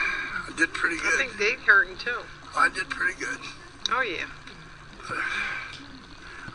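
Nothing stood out as a technical problem on listening to the clip.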